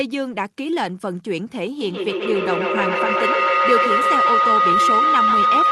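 A ringing tone of about one and a half kilohertz rises out of the speech from 1.81 s and runs to the end, with repeats roughly every 150 ms and peaking about 6 dB above the voice. This is feedback howl: a microphone-to-loudspeaker loop gaining level on each pass.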